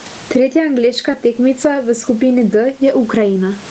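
Gain pumping runs through the whole speech clip, with a level swing of roughly 20 dB. The likely cause is input gain set far too high, with a fast limiter or compressor clamping down on each peak, so loud and quiet parts sit squashed close together.

Short concealed packet loss falls between 1.11 and 1.15 s. About 20 ms of audio arrived too late to decode, and the receiver covered the gap by extending the preceding sound for about 20 ms before blending back into real audio. The result is a brief smear or wobble, heard against the call's roughly 8 kHz upper bandwidth limit.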